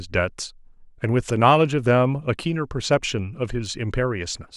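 Speech with clock slip clicks running from 0.12 to 4.52 s: faint one-sample ticks roughly every tenth of a second, likely two unsynced clocks drifting apart by around 200 ppm.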